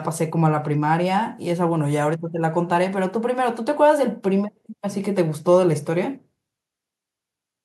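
Nothing in this recording stood out as a technical problem when listening.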